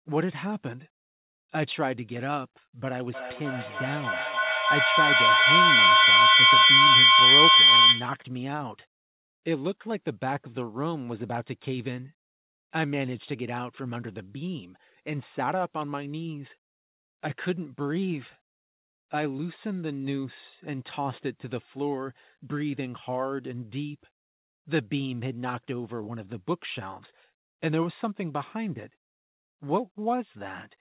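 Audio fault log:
3.14–8.29 s, feedback howl: a microphone-to-loudspeaker loop gained level each trip, building a tone near 3 kHz with repeats roughly 300 ms apart that peaks about 13 dB above the speech.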